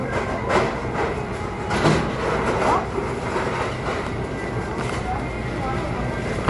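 From start to finish the treble stops dead at 11.3 kHz, and the quiet detail swirls and flickers with a watery edge while attacks smear. That's likely MP3 compression, at a bitrate that fits around 48 kbps, starving weak frequency lines frame by frame.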